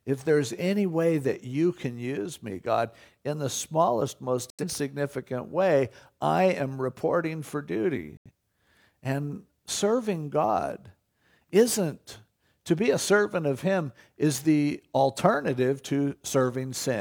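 Speech, with two short digital broadcast dropouts. The audio goes silent from 4.50 to 4.64 s, right after "in the smallest most", and again from 8.17 to 8.31 s, after "I am reporting for". Each hole sounds like the receiver muting when frames failed and coming back once clean ones arrived. The roughly 85 ms of missing programme in each fits a couple of lost frames. Whatever was said in those gaps is simply gone.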